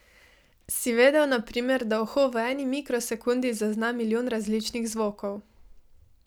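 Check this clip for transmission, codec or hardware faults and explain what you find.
No fault can be heard anywhere in this speech recording. There is nothing in it to explain.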